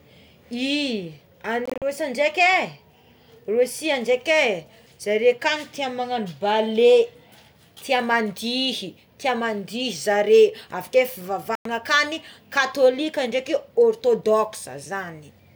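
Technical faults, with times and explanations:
1.66–1.82 s and 11.55–11.66 s, Bluetooth dropout: about 100 ms of sound goes missing each time, broken into short gaps of up to 41 ms at first. The sound skips ahead rather than pausing, pointing to late wireless packets, likely discarded.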